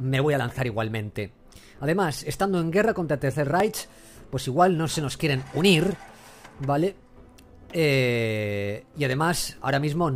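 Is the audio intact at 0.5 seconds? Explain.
Yes, at 0.5 seconds the audio is intact, with no audible dropout, distortion or other fault at that point.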